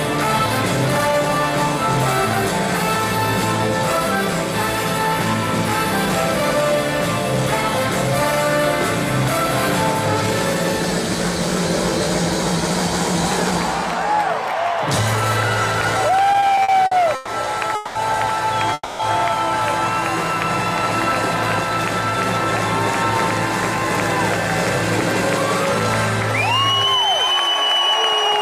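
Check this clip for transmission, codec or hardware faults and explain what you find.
Three faults cluster between 16.3 and 19.0 s, all of them gaps filled in rather than sound lost.

From 16.33 to 17.30 s there are repeated stalls (stutter): the sound drags and catches seven times, the longest hold about 120 ms. Packets arrived late, so the jitter buffer kept running dry and the receiver stretched the last sound across 280 ms, nearly a third of that stretch.

Call audio freezes follow at 17.75–17.98 s and 18.73–19.02 s: the sound hangs as a fading continuation for 200 ms, then 260 ms, the second ending in about 20 ms of silence. Held-up packets likely emptied the buffer, each pause inserting delay before playback resumed.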